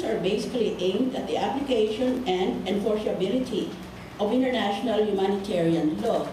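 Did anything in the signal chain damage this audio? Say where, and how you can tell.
Yes. At 2.17 s the sound jumps forward with no gap, a millisecond or two of audio missing. That points to the driver or buffer stage, most likely a dropped buffer (overrun), where samples were overwritten before being read and the two sides spliced together.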